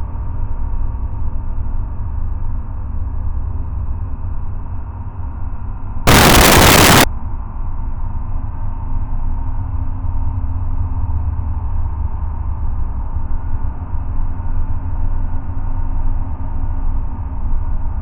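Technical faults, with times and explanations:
6.07 to 7.04 s, samples built from the wrong bytes: for just under a second the reader assembles each sample from misaligned or swapped bytes, so the rapidly fluctuating low-order bits land in the most significant positions and dominate every value. The result is a sudden burst of loud, harsh broadband noise, close to white on the louder sounds, before clean playback returns at 7.04 s.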